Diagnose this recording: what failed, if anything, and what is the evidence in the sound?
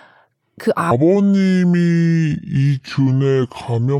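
From 0.91 s to the end, the speech is a section at the wrong speed: slowed to 0.646 times, roughly seven semitones deep, likely from a playback clock mismatch. A spectrogram shows harmonics and formants stepping down abruptly, with syllables and waveform cycles stretched wider.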